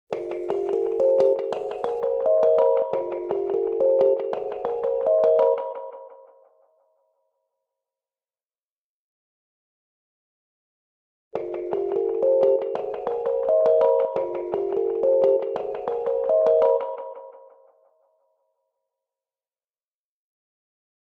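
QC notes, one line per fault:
0.00–2.00 s, pre-emphasis left on: the treble is lifted by about 13 dB at 10 kHz relative to 1 kHz, and the matching de-emphasis cut was never applied, so the sound comes across thin, glassy and hissy-bright with exaggerated sibilance. The lift begins gently around 2 kHz and keeps climbing, which fits the 75 µs FM curve. That steady rise separates it from a fixed treble shelf or a lost low end, where the low-mid body would also be missing.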